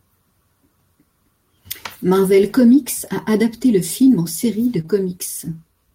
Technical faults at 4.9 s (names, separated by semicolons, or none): short concealed packet loss